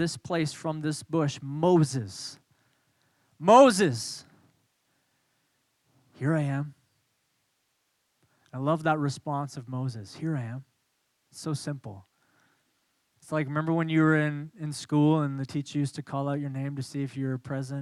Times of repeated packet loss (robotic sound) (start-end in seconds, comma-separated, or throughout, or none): none